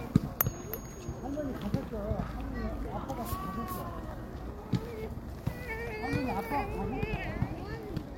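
No audible technical faults in this sound recording.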